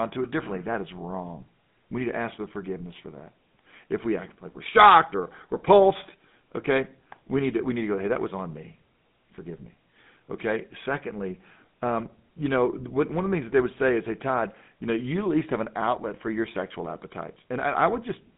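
From start to finish the speech carries the sound of the GSM full-rate codec, the original mobile-phone coder. It models the vocal tract as a filter and excites it with a sparse, regularly spaced pulse train, which fits a 13 kbps stream. The band runs from about 150 Hz to 3.6 kHz, so the lows are thin and there is no top end. The coarse excitation is plainly audible as a buzzy, gravelly roughness over the voice.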